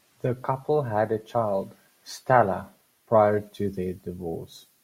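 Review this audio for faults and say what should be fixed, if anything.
Nothing stood out on listening to this speech recording, so there is nothing here that needs fixing.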